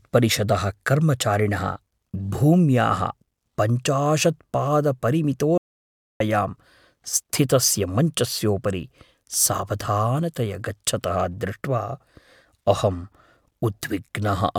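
At 5.58 s the speech cuts out abruptly. It returns at 6.20 s. This is an audio dropout to silence lasting 0.63 s. The gap is total silence, with no room tone. The input was likely lost while recording continued. Speech there is gone.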